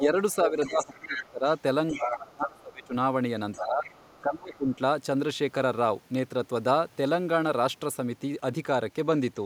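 Other side's voice leaking through, from 0.0 to 1.28 s: a second talker sits roughly 10 dB under the speech, likely because the echo canceller left loudspeaker pickup in the microphone signal. Speech suppressed in double talk, from 0.0 to 2.94 s: with both sides talking, the main voice sinks by as much as roughly 20 dB across about two seconds in total, likely because the canceller could not tell the talker from the echo and turned both down. Other side's voice leaking through again from 1.88 to 2.87 s, now only around 5 dB below the speech, likely the same uncancelled loudspeaker path. Other side's voice leaking through from 3.52 to 4.76 s, a faint trace roughly 25 dB down, likely residual echo the canceller missed. Speech suppressed in double talk from 3.57 to 4.67 s, where the voice drops by up to roughly 20 dB over most of that span, likely the canceller again attenuating both sides during overlap.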